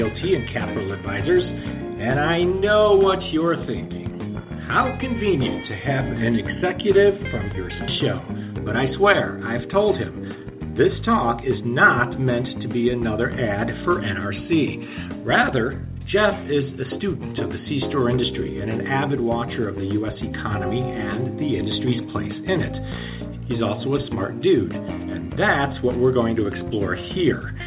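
At 7.88 to 7.90 s there's a skip ahead: about a second of audio was dropped while later material was already queued, so playback jumps straight across with no fill at all, and the two sides butt together almost seamlessly, with the missing stretch simply gone.

Right after, from 8.19 to 9.33 s, there's a jitter buffer speed-up. The buffer was running deeper than its target, so the receiver trimmed short pitch-period slices, about a tenth of a second in total, playing at 107% speed. Pitch holds, but things sound slightly rushed, all within the 4 kHz ceiling of the G.711 call path.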